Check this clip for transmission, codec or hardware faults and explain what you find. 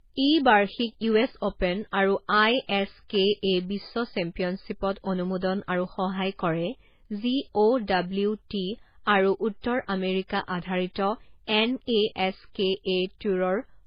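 The speech sounds dull from start to finish, with nothing above 5.1 kHz, and the artefacts of two codecs are heard together. This points to transcoding between lossy codecs, likely a very low-bitrate MP3 re-encoded to HE-AAC. The second encoder spent its few bits reproducing the first one's damage and then added its own, so two kinds of artefact overlap. The lowest band limit in the chain, 5.1 kHz, carried through.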